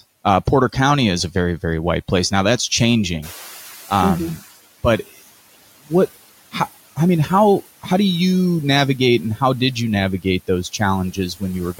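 Noise suppressor artifacts run through the whole speech clip. Steady background noise is pulled down by about 15 dB, sinking in the gaps and rising under the speech.

Around 3 s the room noise jumps by about 14 dB, settling about 20 dB below the speech. From 3.22 to 4.46 s the noise suppressor is catching up. Its noise estimate trails the rise, so the louder noise first passes with only about 11 dB of reduction, then fades down over 1.24 s as the estimate adapts. A steady drift down after a jump marks adaptation, not the frame-by-frame warble.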